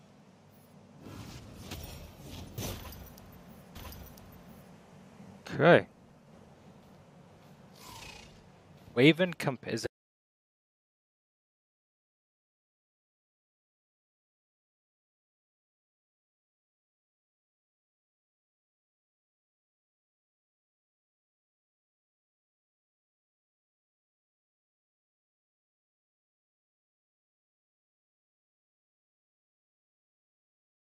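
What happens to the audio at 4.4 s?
At 4.4 s the audio is inside a stream segment repeated, running from 3.75 to 4.74 s. The player queued the same segment twice. So about one second of sound plays again. A small blip marks the jump back.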